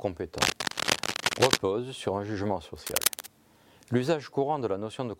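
From 0.38 to 1.59 s and again from 2.76 to 3.27 s, cable scratch noise rustles over the sound at roughly equal loudness. It comes in uneven bursts rather than steady hiss, likely from a worn cable or contact being moved.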